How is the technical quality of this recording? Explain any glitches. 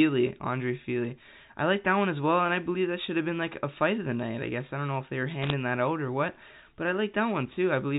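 The recording has one glitch on an otherwise band-limited telephone path, with nothing above 4 kHz, as G.711 A-law coding would give. From 5.42 to 5.53 s, just after "know if they were", bit errors on a digital phone line flip bits in individual samples, at a rate of about 0.7 percent. The result is a brief burst of sharp ticks and crackle over the speech, which ends before "that out or what".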